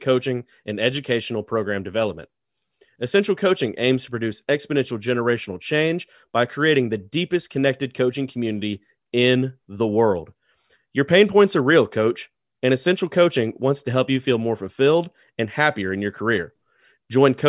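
Speech recording, with no technical faults detected anywhere in the clip.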